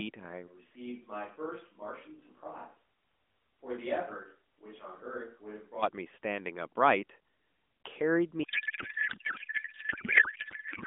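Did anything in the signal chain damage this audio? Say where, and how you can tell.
Yes. The close microphone likely dropped out at the capture stage, leaving a distant one from 0.49 to 5.81 s: speech turns roomy and hollow, roughly 10 dB quieter, with audible room noise.

A codec payload misread on the network side, consistent with octet-aligned AMR being parsed as bandwidth-efficient, replaces the speech with garbled warble from 8.44 s to the end, under the AMR-NB narrowband limit.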